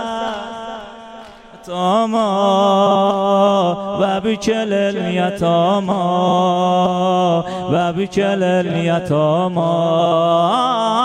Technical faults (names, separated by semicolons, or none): frames out of order